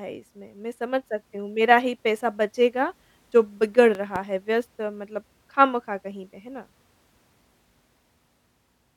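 Speech with a loud pop, in fact two in quick succession, between 3.95 and 4.18 s, peaking a few decibels above the voice. The speech carries on underneath, which separates it from a dropout; the cause is likely a voltage pulse from a plug, switch or static discharge.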